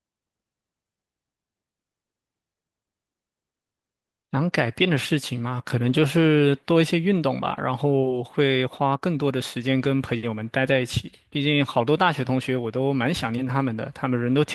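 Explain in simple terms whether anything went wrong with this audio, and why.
Nothing seems to have gone wrong here; listening all the way through this speech recording, there's no moment where the sound trips up or does anything it shouldn't.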